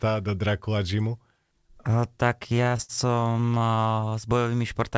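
Repeated stalls (stutter) run from 2.57 to 4.15 s. Packets arrived late, so the jitter buffer kept running dry, and across 29 short gaps, the longest 71 ms, the receiver stretched the last sound to cover about 30% of that stretch. The speech drags and stutters, yet nothing is lost.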